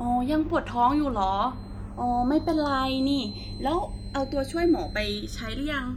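Channels drifting apart runs through the whole speech clip. The two channels appear to be clocked separately, with a mismatch of around 150 parts per million, so their offset grows to under a millisecond by the end. Summed to mono, the comb notches sweep slowly, giving a gradual flanging colour.

A feedback whistle enters at 1.47 s and continues to the end: a thin, steady tone at 4.1 kHz, about 20 dB below the speech, swelling and fading slowly in level. Its likely cause is a loudspeaker-to-microphone loop sitting just at the edge of feedback without running away.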